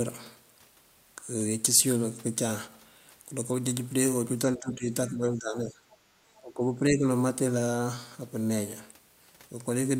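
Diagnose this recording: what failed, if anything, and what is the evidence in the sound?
Speech suppressed in double talk, call processing: the speech dips by roughly 15 to 20 dB at 4.55–4.92, 5.1–5.81 and 6.04–7.06 s, likely from echo-canceller ducking. On the waveform, the envelope sags in these spans.

Other side's voice leaking through, call processing: a faint scrap of a second voice sounds at 5.91–5.96 s, around 35 dB below the speech, likely residual echo. It shows as a brief spectrogram smear.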